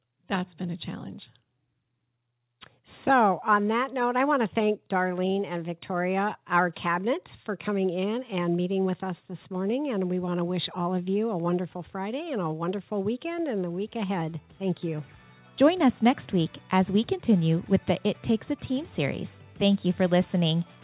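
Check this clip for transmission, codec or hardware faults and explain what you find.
Nothing stood out on listening, and the sound comes across as an ordinary narrowband call with nothing above 4 kHz.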